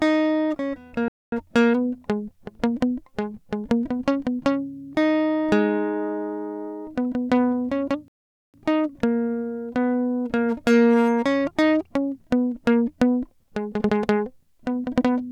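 At 1.08 s the music cuts to silence for about 240 ms, then returns at 1.32 s. A longer gap follows from 8.08 to 8.54 s, about 460 ms. Both are playback stalls, likely from the player running short of data.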